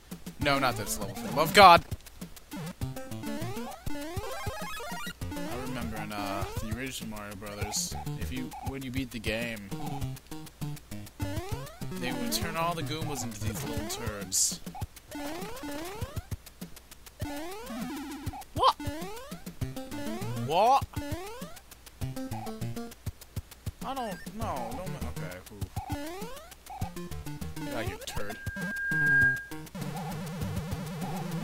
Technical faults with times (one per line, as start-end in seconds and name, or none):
28.08-29.63 loudspeaker feedback squeal